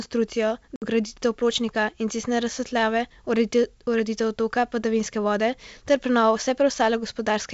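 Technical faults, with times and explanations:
0.76 to 0.85 s, packet loss on an ADPCM call: a sharp 60 ms hole of silence, which fits a few lost packets. The decoder's predictor and step size drift from the sender's. So "pločnika in cestne razsvetljave" resumes slightly distorted, then settles.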